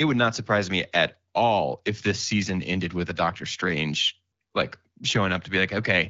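No technical faults can be heard anywhere in the speech. It comes through the AMR wideband (HD Voice) codec at 12.65 kbit/s, where the coding leaves only a light trace and the speech stays clear.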